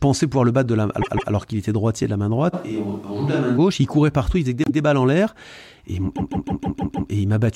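At 1.01 s a roughly 0.16 s stretch of speech plays twice more, a stutter of repeated frames where a run of compressed frames, which fits about six frames, got sent again. Together the replays add about 0.31 s. From 2.55 to 3.56 s the sound suddenly goes hollow and roomy, thinner in the bass and around 5 dB quieter, with room noise creeping up to roughly 35 dB below the speech. It snaps back just as abruptly, most likely a switch to a distant microphone after the close one dropped out. The same repeated-frames stutter returns at 4.64 s with one extra play of that 0.16 s block, then at 6.15 s it loops six extra times, dragging on for about 0.94 s of added time.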